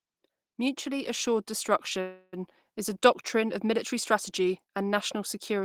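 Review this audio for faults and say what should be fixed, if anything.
From 0.83 s to 2.56 s the level of this speech climbs by about 4 dB as automatic gain rising, after the control judged the input too quiet. Voice and background noise swell together, so a waveform shows the whole envelope, noise floor included, widening steadily across those 1.7 seconds. Setting a sensible input level and slowing or capping the gain control's attack would prevent it.

At 2.01 s to 2.35 s there is a call audio freeze. The sound stops progressing and the last moment is stretched into a fading buzz or hiss lasting about 0.31 s, likely because packets were delayed and the jitter buffer ran dry. A spectrogram shows smeared, repeating horizontal bands instead of changing speech, with no silent gap, and speech resumes where it left off, now about 0.31 s later. A larger adaptive jitter buffer or a more stable network path would prevent it.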